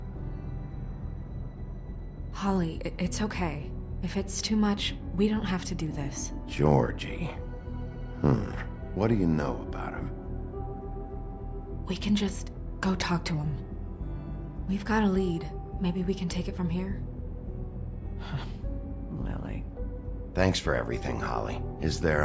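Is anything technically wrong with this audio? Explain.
No, nothing technically wrong can be heard here.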